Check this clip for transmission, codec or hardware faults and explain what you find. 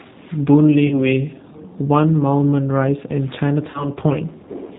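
Two faults are present: codec coloration throughout, and two concealed packet losses.

The G.729 codec is audible across the whole clip. Nothing above 4 kHz survives, and the speech has a slightly rough, synthetic edge. That comes from rebuilding each 10 ms frame from a vocal tract filter, a pitch predictor and sparse pulses, which fits an 8 kbit/s G.729 stream.

VoIP packet loss concealed by the speech codec occurs at 0.87–1.00 s and 3.70–3.90 s. Each event is about 40 ms of missing audio, consistent with two lost packets. The decoder extends its last pitch and filter at falling gain, giving a fading buzzy or noisy smear, and the speech stays weak briefly after packets resume.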